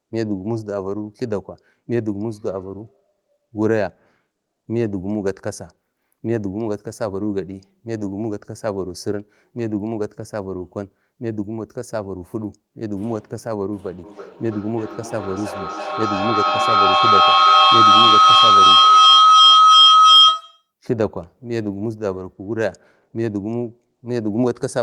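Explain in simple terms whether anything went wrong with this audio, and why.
From 14.04 to 20.71 s there's a feedback howl: two devices in one room loop sound back, building a shrill whistle as the sound goes round the loop about three times a second.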